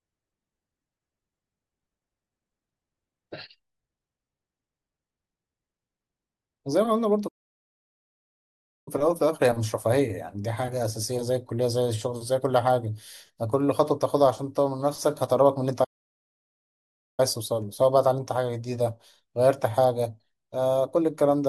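The speech cuts out twice, at 7.27 to 8.88 s and again at 15.84 to 17.20 s, silences of about 1.6 s and 1.3 s. That's a playback stall, likely the player running dry or its thread getting blocked before output picked up again.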